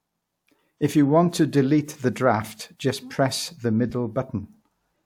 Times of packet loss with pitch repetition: none

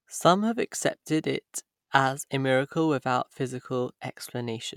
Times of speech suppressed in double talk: none

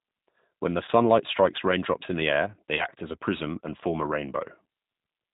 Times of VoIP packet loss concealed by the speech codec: 0.85-0.90, 2.75-2.87

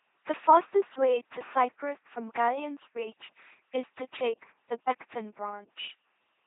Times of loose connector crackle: none

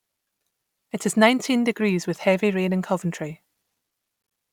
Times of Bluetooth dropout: 4.22-4.32

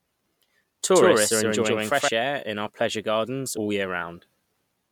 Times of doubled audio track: 0.94-2.08

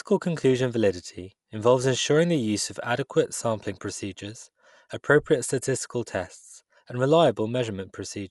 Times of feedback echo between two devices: none

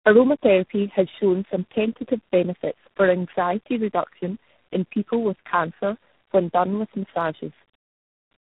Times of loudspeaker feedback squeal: none

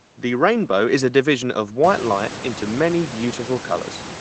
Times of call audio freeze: none

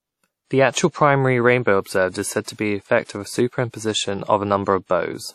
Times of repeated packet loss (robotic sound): none

